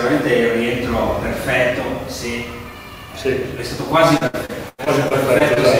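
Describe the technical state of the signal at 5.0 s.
At 5.0 s you're inside a run of repeated packet loss, 4.17 to 5.58 s: short dropouts keep getting patched by stretching the last sound, so it turns choppy and robotic.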